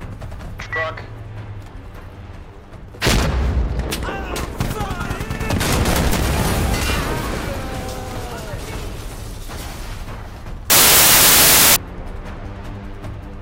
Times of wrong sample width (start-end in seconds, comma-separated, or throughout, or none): 10.70-11.76